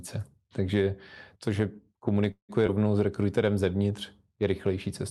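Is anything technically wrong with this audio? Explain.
Yes, there are two faults close together.

From 2.31 to 2.51 s the sound hangs on as a fading buzz, then drops to about 100 ms of silence before carrying on where it left off. This is a call audio freeze. Packets were likely delayed until the jitter buffer ran dry, so about 173 ms of filler were inserted and nothing was lost.

At 2.67 to 2.70 s, just before "s rekruterem", there is a brief smear. This is short concealed packet loss. About 40 ms never reached the decoder in time. A short synthetic continuation bridged the hole, and the playback skipped slightly ahead to catch up.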